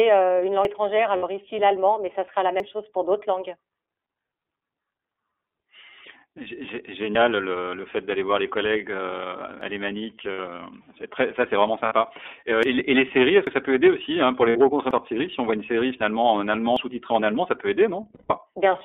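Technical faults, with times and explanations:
Throughout: iLBC codec. The speech is confined to a narrow telephone band of about 300 Hz to 3.5 kHz, with nothing above. The 13.33 kbps, 30 ms frame coding is plainly audible as a rough, synthetic edge. That steady coloration sets it apart from the brief events below.
0.65, 2.60, 7.15, 9.61, 12.63, 13.47, 14.91 and 16.77 s: dropped buffer (overrun). Each is a sudden forward jump with no silence, most likely because samples were overwritten before being read. About 50 ms goes missing each time, except about 100 ms at 0.65 s and about 150 ms at 14.91 s. The one at 16.77 s comes just after "série finalement en allemand".
1.17–1.24, 10.33–10.39, 11.85–11.93, 14.50–14.57 and 18.15–18.34 s: lost iLBC frames. Two 30 ms frames (60 ms) are lost each time, and five frames (150 ms) in the last one. The decoder fills each gap with a held, buzzy repeat of the last pitch cycle rather than skipping. 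The gap at 10.33 s falls just before "c'est très ça c'est", and the one at 11.85 s just after "très ça c'est vraiment". The voice is right again almost at once.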